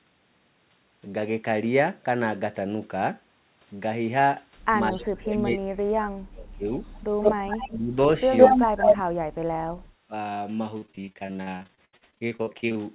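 Speech suppressed in double talk begins at 4.92 s and runs to 6.64 s. The talker's level collapses in pieces for about a second and a half in total, dropping by as much as about 35 dB. The likely cause is an echo canceller that hears both sides at once, cannot tell its own talker from loudspeaker echo, and pulls everything down. It returns more briefly at 7.76–7.96 s, with a dip of about 10 dB.

Echo leak appears between 6.81 and 7.01 s as a faint delayed copy of the voice trailing 162 ms behind, sitting about 30 dB under the speech. It is likely residual loudspeaker sound that the far side's echo canceller failed to remove and sent back. At 7.22–7.78 s the leak turns loud, about 5 dB above the direct speech. At 8.37–8.97 s it is louder still, about 10 dB above, so a second, lagging voice competes openly.

The suppression comes back hard from 8.78 to 9.49 s. About half a second of speech is gouged out, with drops near 40 dB, overlapping the end of that loud echo. 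A last short dip of about 10 dB hits at 10.08–10.12 s.

Repeated packet loss (robotic sound) fills 10.78–12.77 s. Thirty separate holes, the longest about 77 ms, are each bridged by stretching the preceding sound. Roughly 39% of this stretch is concealment rather than real audio, so the voice turns choppy, with fragments missing. All of this sits within the muffled narrowband sound of the call, which has nothing above 4 kHz.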